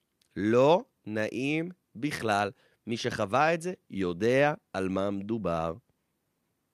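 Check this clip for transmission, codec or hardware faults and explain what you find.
Checking this clip turned up nothing to explain: I find no faults in it.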